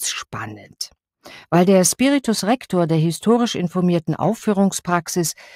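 No technical faults can be heard anywhere in the audio.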